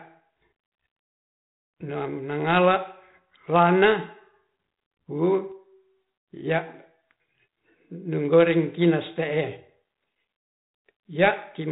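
No technical faults are audible.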